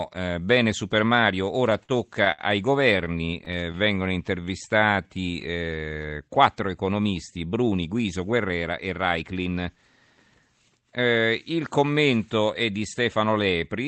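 From 1.45 to 2.41 s and again from 2.98 to 3.76 s, packets arrived late and the jitter buffer kept running dry, producing repeated stalls (stutter). The receiver stretched the last sound across five gaps, the longest 66 ms, then seven shorter ones of up to 12 ms. Nothing is lost, but the speech drags and catches.

From 3.61 to 5.58 s, a jitter buffer slow-down rebuilds the reserve by repeating pitch periods, adding 221 ms. The speech runs at 89% speed with unchanged pitch, sounding drawn out.

Right after "quattro economisti", from 7.46 to 9.24 s, a jitter buffer speed-up trims surplus delay by cutting roughly a fifth of a second. The speech runs at 112% and sounds hurried.

Throughout, the call path's Opus coding limits the audio to an 8 kHz bandwidth.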